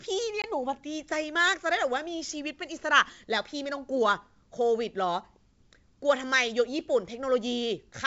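Speech carried over a wideband G.722 telephone link at 64 kbit/s, with a clear top end up to 7 kHz. Packet loss on an ADPCM call strikes at 0.42–0.45 s: about 20 ms of audio, likely a single packet, goes missing and is filled with silence, leaving the decoder's predictor and step size out of step with the sender's. The hard-edged gap is followed by slightly distorted sound until the decoder recovers.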